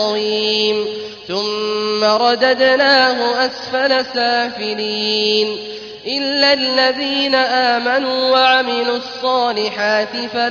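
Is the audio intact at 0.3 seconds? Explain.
Yes, the audio is intact at 0.3 seconds, with no dropout, glitch or other fault there.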